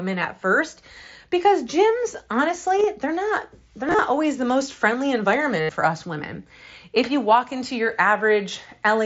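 Concealed Bluetooth headset packet loss breaks the speech three times, over a wideband mSBC link. At 2.78 to 2.84 s, scattered short gaps total about 30 ms. The receiver patched each with a matching stretch of recent waveform. At 3.88 to 3.99 s, about 52 ms goes missing the same way. At 5.61 to 5.69 s, a solid 82 ms run becomes a held buzzy tone, then a small warble as speech resumes.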